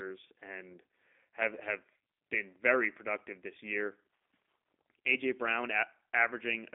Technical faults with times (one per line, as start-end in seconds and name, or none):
0.00-6.74 G.729 codec